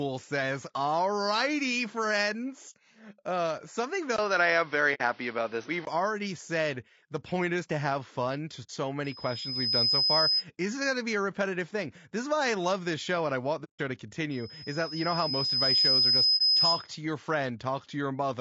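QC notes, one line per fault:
Throughout, low-delay AAC compression: the speech has a rough, grainy texture with noise filling the gaps between pitch harmonics and a top band that sounds thin and somewhat synthetic. The damage is plainly audible and steady across the whole clip, which points to AAC-ELD at a low rate, likely about 32 kbps. Its short frames resolve harmonics poorly and leave few bits for detail. Because it never comes and goes, it is distinct from the local events below.
4.16 to 5.87 s, input switched to a poorer device: a silence of about 20 ms marks the switch, and then the speech turns dull and boxy. Nothing is left above 6.1 kHz, the level shifts by roughly 5 dB, and a new background noise sits around 30 dB under the speech. The full sound returns at 5.87 s. This is likely a change to a narrower microphone or a headset call profile. Unlike codec loss, the whole tone and noise floor change together for a stretch.
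4.94 to 5.01 s, 8.63 to 8.70 s, 13.64 to 13.80 s and 16.37 to 16.41 s, AAC frame loss with muting: soft-edged holes of 60, 60 and 150 ms and a brief 30 ms dip, where lost frames were decoded as silence. The overlapping transform windows fade the sound out and back in, so each gap has rounded edges. That separates these gaps from the 20 ms silence at the device switch. The lengths all fit whole frames of about 30 ms.
9.04 to 10.45 s and 14.31 to 16.90 s, loudspeaker feedback squeal: a single tone at 5.1 kHz swells up out of the sound as the loop gain at that frequency climbs past one. It takes about 0.7 s to build in the first run and about 1.5 s in the second. It ends up roughly 5 dB and then 10 dB above the speech. The growing, pure, fixed-pitch whistle marks it as feedback rather than codec noise, which is broadband.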